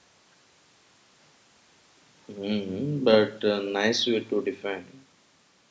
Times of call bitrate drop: none

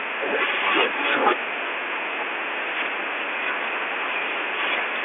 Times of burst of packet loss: none

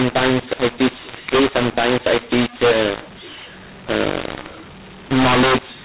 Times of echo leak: none

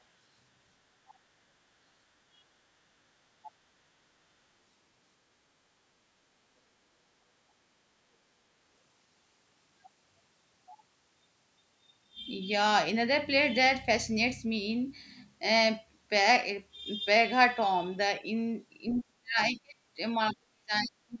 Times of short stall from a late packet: none

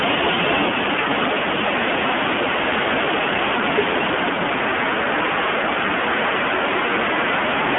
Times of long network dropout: none

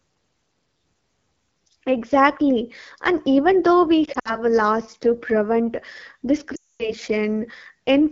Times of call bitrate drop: none

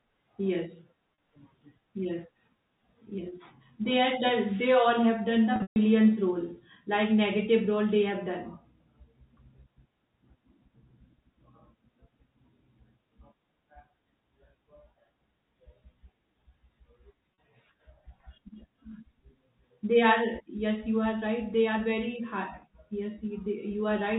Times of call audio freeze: none

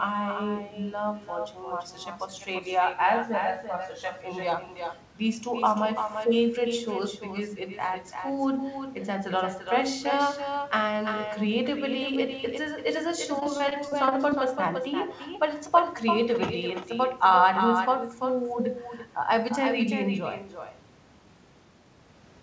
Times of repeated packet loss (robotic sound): 13.40-14.33

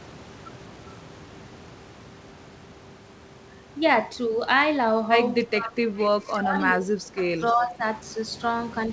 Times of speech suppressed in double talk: 5.47-5.81, 6.13-7.84

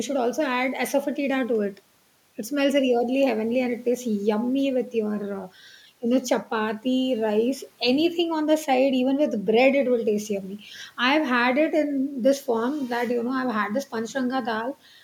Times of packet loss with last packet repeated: none

